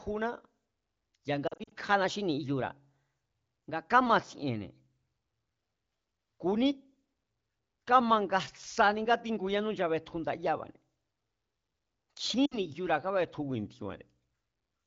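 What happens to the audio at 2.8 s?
At 2.8 s the audio is inside a stretch from 2.04 to 4.06 s where playback runs about 5.5% fast and pitch rises by 92 cents, just under a semitone. The speech sounds hurried and sharpened, then snaps back to its normal rate at 4.06 s. The likely cause is a drift correction step: clock-matching software raised the playback rate in a single jump to drain its buffer, moving speed and pitch together.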